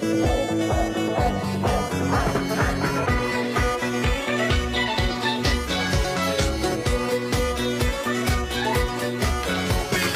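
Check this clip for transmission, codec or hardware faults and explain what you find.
One hardware fault is present. From 4.07 to 8.13 s a USB whine appears: 1 ms bus frame current leaking through power or ground, giving a steady 1 kHz tone, strongest at 2 kHz, roughly 30 dB below the signal.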